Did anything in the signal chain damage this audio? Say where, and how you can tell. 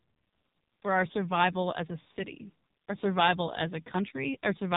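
Yes: AMR narrowband mobile codec throughout, at the codec stage. Nothing passes above 3.8 kHz, and heavy buzzy, synthetic pulse-modelled speech points to a very low bitrate near 5.9 kbps.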